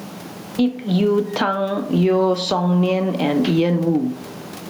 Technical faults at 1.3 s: gain pumping

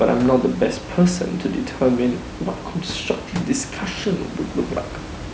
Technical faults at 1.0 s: none

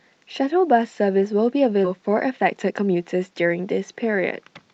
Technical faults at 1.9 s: skip ahead

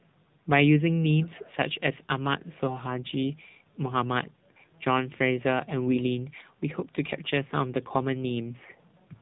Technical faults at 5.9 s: AMR narrowband mobile codec; AMR bit errors

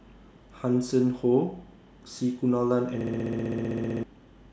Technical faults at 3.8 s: system hang loop

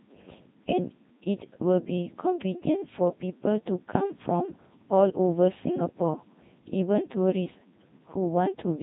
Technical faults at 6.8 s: Codec 2 vocoder

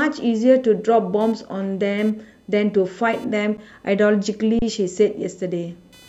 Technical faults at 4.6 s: computer activity noise; underrun with held sample

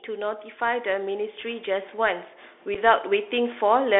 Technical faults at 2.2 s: Bluetooth CVSD headset codec; automatic gain rising

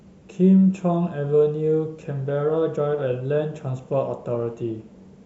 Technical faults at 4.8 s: none

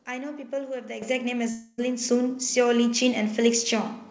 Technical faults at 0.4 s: none

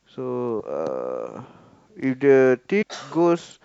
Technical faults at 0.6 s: compressed frames skipped

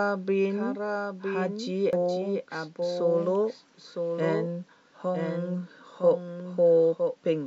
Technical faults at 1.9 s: doubled audio track; damaged data in a compressed stream

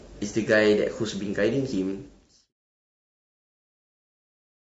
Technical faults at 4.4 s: low-delay AAC compression

